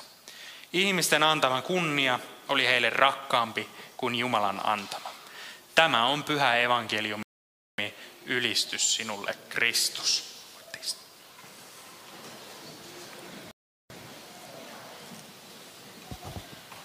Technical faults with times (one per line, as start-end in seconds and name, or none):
7.23-7.78 playback stall
13.51-13.90 playback stall